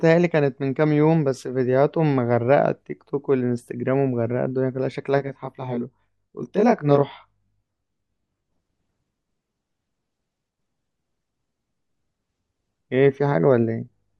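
From 5.18 s to 8.52 s, one channel of the speech runs late by roughly 20 ms, and the two channels are summed to mono. This channel delay causes comb filtering: the parts common to both channels cancel at regularly spaced frequencies, with the first notch only a few tens of hertz up and many more packed tightly above it. The voice sounds rough or slightly doubled.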